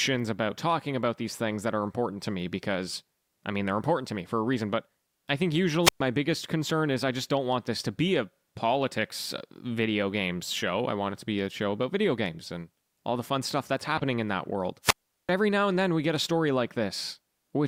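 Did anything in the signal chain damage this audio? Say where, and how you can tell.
Yes. This is wireless microphone squelch dropout on the radio link. The signal fades and the receiver's squelch mutes it: about 120 ms at 5.83–6.00 s, and 385 ms after "in that world", at 14.82–15.31 s.

A corrupt frame was decoded in the codec. Damaged bits put energy at wrong frequencies, making short blips: about -25 dBFS at 8.84 s, after "this to be a", and about -20 dBFS at 13.97–14.02 s.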